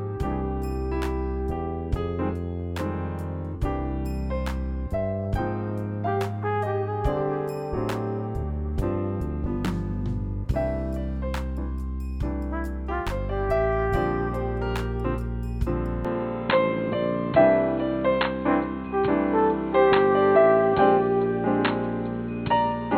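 At 16.05 s the sound turns dull, with nothing above 4.2 kHz, a level shift and faint new noise; the input likely switched to a poorer device.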